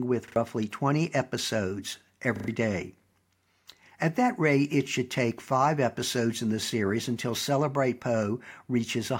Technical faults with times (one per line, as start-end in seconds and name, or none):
0.28-0.36 repeated buffer
2.36-2.48 repeated buffer